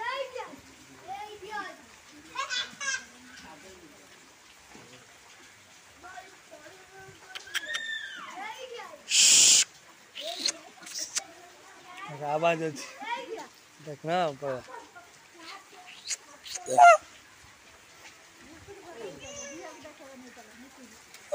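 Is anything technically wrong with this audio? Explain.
Yes. Hard clipping at 16.81 to 16.89 s: peaks overdrive a stage by about 2 dB and are sliced flat, giving brief crackle, flat-topped waveform peaks and a vertical smear of high harmonics on a spectrogram.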